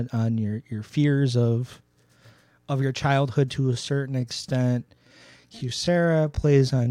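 Software likely stretched the speech from 3.56 s to the end at 6.91 s, playing it at about 0.69 times its original pace while keeping pitch. This time-stretched section sounds abruptly slower and drags.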